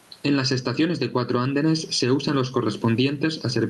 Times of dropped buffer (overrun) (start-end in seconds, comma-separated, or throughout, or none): none